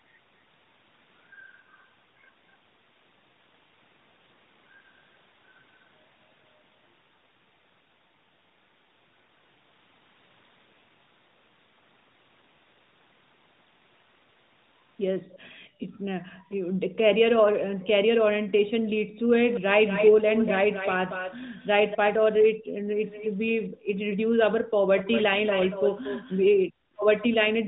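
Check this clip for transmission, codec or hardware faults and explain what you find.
Two related faults show up in the back half, both tied to the far end playing the call on a loudspeaker. The narrowband mobile codec band-limits everything to about 3.8 kHz.

Echo leak: From 15.3 to 15.39 s and 17.82 to 17.87 s there are faint ghost copies of the speech, roughly 30 and 25 dB down. From 19.51 to 21.97 s and 23.01 to 27.27 s they get much stronger, only about 10 dB under the talker, trailing by around 235 to 250 ms. The likely cause is an echo canceller on a speakerphone failing to remove all of its own loudspeaker output picked up by the mic, so you hear a delayed second voice.

Background gated by the echo canceller: At 18.82 to 19.16 s, 21.99 to 24.74 s and 26.68 to 26.94 s the room tone suddenly sinks, by as much as about 40 dB, then comes back. That's the canceller clamping the mic down while the loudspeaker is active and releasing afterwards. 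The first and last dips are short, around a third of a second each. The middle stretch adds up to about a second of dropouts.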